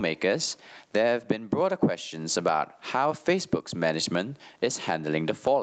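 A speech recording with gain pumping running through the whole clip, with the gain swinging by around 15 dB. This is likely a fast limiter or compressor repeatedly clamping an input set far too hot, which also flattens the difference between loud and soft passages. The top end stops near 8 kHz through the call path.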